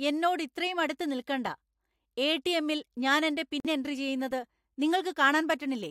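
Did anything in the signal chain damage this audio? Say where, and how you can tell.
Yes, at the codec decoding stage: a corrupt frame muted from 3.60 to 3.67 s, just before "എൻട്രി ചെയുന്നത്". The sound cuts off abruptly into roughly 66 ms of digital silence, a flat waveform and a blank vertical band on a spectrogram, which points to two corrupted frames that the decoder rejected and the player filled with silence.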